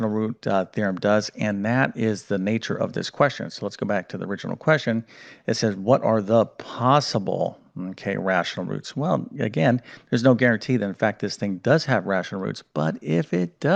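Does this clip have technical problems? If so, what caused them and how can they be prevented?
No, there are no faults here; the audio carries the ordinary band-limiting of a call codec path, with the top end rolling off around 12 kHz, which is expected for that route and needs no preventive action.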